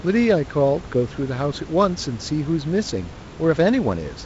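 This speech clip has no technical fault. Room noise sits about 17 dB below the speech, and nothing reaches above 7.7 kHz, which fits G.722 wideband telephone coding, here with a light coding hiss and a reduced bitrate of 48 kbit/s.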